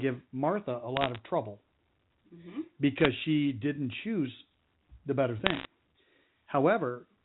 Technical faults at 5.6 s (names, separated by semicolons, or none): bit errors on a digital phone line